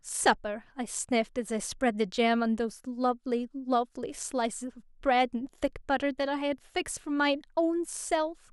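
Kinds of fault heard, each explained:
No technical faults are audible anywhere in this speech recording.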